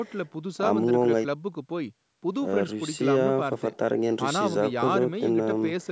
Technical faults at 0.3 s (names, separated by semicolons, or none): none